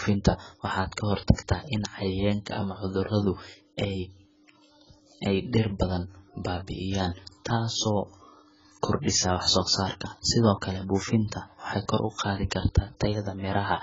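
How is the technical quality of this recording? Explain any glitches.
Technical quality is poor: heavy coding damage runs through the whole recording.

AAC compression, throughout the clip: the speech has nothing above about 7.6 kHz, and the texture is smeared and warbly, which points to a very low bitrate, around 12 kbps, likely AAC-LC. Short of bits, the encoder lowers its cut-off and quantises the remaining frequency lines coarsely. That leaves gaps and substituted noise in the spectrum, so the speech sounds dull, with fizzy, watery sibilants and smeared consonants.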